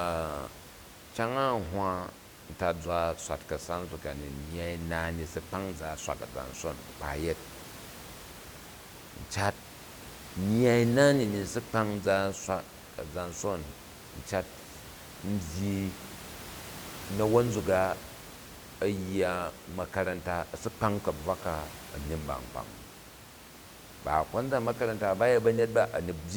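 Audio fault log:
No faults turn up anywhere in the recording. The room's own background noise sits about 17 dB below the speech, as part of the recorded space.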